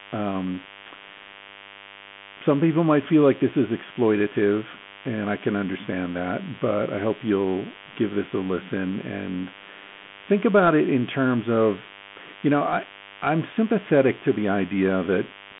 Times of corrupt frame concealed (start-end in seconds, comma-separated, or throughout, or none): none